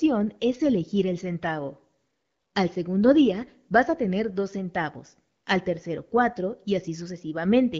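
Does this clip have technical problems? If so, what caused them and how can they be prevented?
No, there is no fault to trace or prevent: the speech runs over an AMR wideband (HD Voice) link at 12.65 kbit/s, a rate at which that codec keeps speech intelligible.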